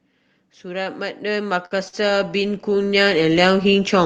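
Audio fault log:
0.42–4.05 s, automatic gain rising: the gain control judged the input too quiet and keeps turning it up, so speech and background swell together right to the end.
1.65–1.77 s and 1.88–1.95 s, short stall from a late packet: the jitter buffer ran dry twice and stretched the last sound, by about 56 and 49 ms, giving a brief held sound with a slight buzz or dip, with nothing lost.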